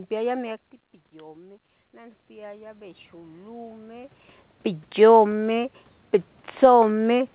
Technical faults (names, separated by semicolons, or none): automatic gain rising